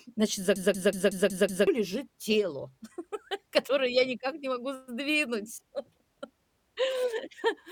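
A system hang loop runs from 0.56 to 1.67 s, ending just before "лежит тело". The computer or driver stalled while the sound hardware kept cycling through its ring buffer, so one 186 ms fragment of speech repeats exactly six times at 5.38 Hz, which fits an 8192-sample buffer. At that length the result is a machine-gun stutter rather than a buzz, and about a second of the real speech is lost under it.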